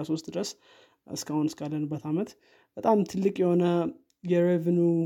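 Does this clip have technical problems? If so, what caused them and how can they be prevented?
No, the speech in this clip has no technical faults, so there is nothing here that needs preventing.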